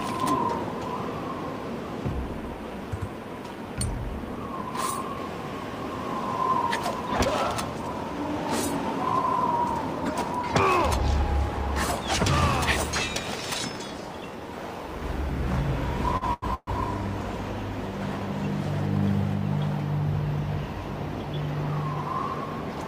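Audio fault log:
16.17–16.24 s and 16.33–16.45 s, short stall from a late packet: the sound is held for 43 ms, then 88 ms, a stretched sustain with a faint buzz or dip, before resuming exactly where it paused, so nothing is lost. Neither hold fades to silence, which distinguishes these from a freeze.
16.54–16.70 s, call audio freeze: the last sound is drawn out for 130 ms as a buzz or hiss that fades, ending in 20 ms of silence, then resumes where it stopped. That decay into silence separates it from the shorter stalls. Packets were likely held up in transit, draining the jitter buffer.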